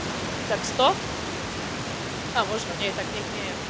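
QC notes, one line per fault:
Nothing to flag here, just some room noise sitting about 10 dB under the speech and the call audio topping out at 8 kHz, which fits a G.722 link at 64 kbps.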